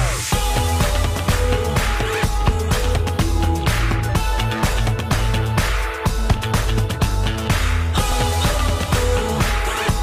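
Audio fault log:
2.14, 5.13, 8.12 s, audio missing between chunks: the audio was likely captured in blocks of about 3 s, with a sliver dropped each time one block closed and the next opened. Each gap is very short, around 15 ms, and the two sides are spliced straight together with no silence. The sound jumps forward abruptly at each join, and the evenly spaced skips, roughly 3 s apart, reveal the block boundaries.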